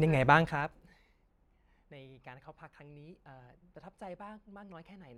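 From 0.37 to 0.98 s, the speech is turned down by roughly 20 dB in unsmoothed 2 dB jumps, around twenty a second. Each jump clicks, producing zipper noise: a rapid ticking riding on the voice while the level falls.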